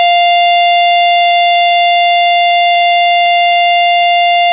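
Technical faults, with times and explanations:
1.24–1.76 s: repeated packet loss (robotic sound). The music breaks into choppy pieces. Short holes, the longest 24 ms, are patched by repeating the last sound, and about 40 ms is simply gone.
2.50–3.63 s: repeated packet loss (robotic sound) again. The holes are patched the same way, with about 120 ms missing, all within the band cut at 4 kHz.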